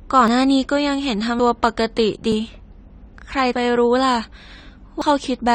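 The whole clip sounds dull and smeared. Sibilants turn fizzy, and sustained sounds warble. The codec damage is plainly audible. This is likely AAC compression at a low bitrate, and the dullness fits AAC-LC near 32 kbps. At that rate the encoder lowers its cut-off and leaves gaps in the spectrum.

Sudden jumps then break the speech at 0.28, 1.39, 2.32, 3.53 and 5.02 s. At each one the sound jumps ahead with no silence. Each is likely a dropped buffer from an overrun. The samples were overwritten before the program collected them, so both sides are joined directly. About a tenth of a second goes missing at 0.28, 1.39 and 5.02 s. About a fifth goes at 2.32 and 3.53 s, which can clip part of a word.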